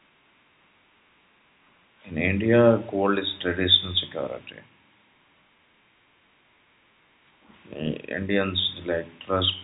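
Speech carried over G.711 telephone coding, band-limited to nothing above 3.8 kHz, with no technical faults to report.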